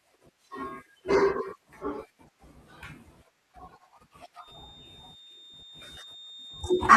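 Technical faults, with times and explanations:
4.37–6.96 s feedback whistle: a thin 3.6 kHz tone, slowly swelling and fading, well under the speech, likely a loudspeaker-microphone loop at feedback's edge, showing as one flat spectrogram line.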